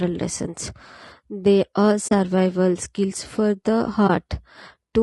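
Low-delay AAC compression runs through the whole clip: the speech sounds rough and grainy, with noise filling the gaps between harmonics and a thin, synthetic top band. The likely cause is AAC-ELD's short frames, which capture pitch harmonics poorly and, at what sounds like about 32 kbps, leave too few bits.

AAC frame loss with muting occurs at 2.07–2.12 s, just after "lessons they are", and again at 4.07–4.10 s, after "skills for the". The decoder zeroed the missing audio: roughly 40 ms, which fits two lost frames, then 20 ms, fitting one. Overlapping windows fade the sound out and back in, leaving a soft-edged hole and then a brief dip.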